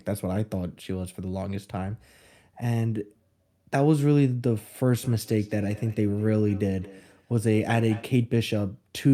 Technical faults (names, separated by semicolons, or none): feedback echo between two devices